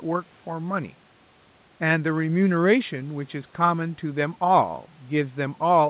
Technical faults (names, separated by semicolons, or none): none